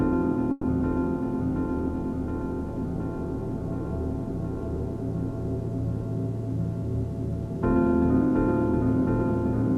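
A call audio freeze from 0.51 to 0.65 s interrupts this recording of sounds, likely caused by packets stalling in transit until the receiver's jitter buffer ran dry. With nothing new to play, the receiver stretched the last sound into a fading buzz or hiss for about 120 ms rather than dropping to silence. When the packets caught up, the audio resumed exactly where it had stopped, so nothing is lost, but everything after that point runs 120 ms late.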